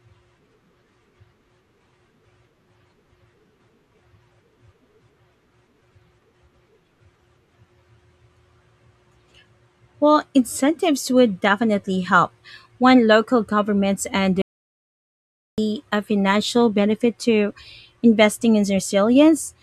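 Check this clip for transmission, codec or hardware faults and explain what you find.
One fault stands out: an audio dropout to silence from 14.42 to 15.58 s, right after "local governments" and before "a financial benefit to". For about 1.16 s the speech cuts out mid-flow and even the room tone vanishes, so whatever was said there is lost. The likely cause is an input that briefly disconnected or muted while the recorder kept writing silence. On a waveform it shows as a flat line, and on a spectrogram as a fully black gap.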